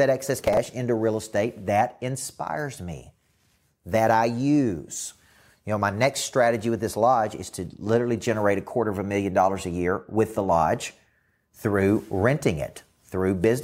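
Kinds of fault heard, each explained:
processor overload crackle: gritty tearing from 0.39 to 0.66 s before "into real estate", as many short buffers, around 5 ms each, missed deadlines and were skipped.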